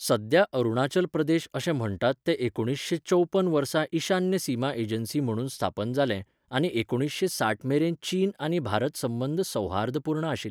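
No technical faults can be heard anywhere in the recording.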